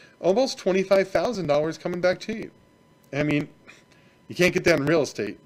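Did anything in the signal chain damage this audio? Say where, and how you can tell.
Yes, at the driver or buffer stage: periodic USB or driver dropouts from 0.96 to 5.37 s, ticking every 0.098 s. Each time a couple of milliseconds are skipped, leaving a waveform discontinuity and a thin vertical broadband line on the spectrogram, about fifty evenly spaced.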